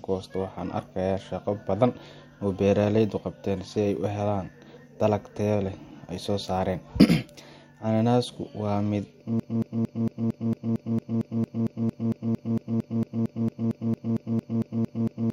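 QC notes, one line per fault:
9.40 s to the end: broken-record loop. The speech suddenly locks onto a fragment about 0.23 s long and plays it back to back, identical each time, roughly 26 repeats until the clip ends. That machine-gun stutter is the giveaway. The likely cause is a player, encoder or stream that stalled and kept pushing out the last chunk it had buffered. Whatever speech should have filled those last six seconds or so is gone, not just masked.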